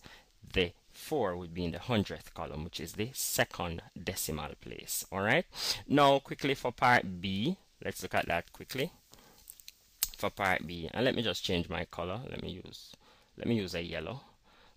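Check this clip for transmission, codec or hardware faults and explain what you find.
One fault turns up, between 8.17 and 10.76 s: pre-emphasis left on. The treble lift of an FM-style 50 µs curve was applied without the matching de-emphasis, so highs rise steadily above roughly 3 kHz to about 11 dB over 1 kHz at 10 kHz. The passage turns thin, bright and sibilant. Unlike a high-pass filter, the low end keeps its weight, and the boost climbs gradually rather than stepping up like a shelf.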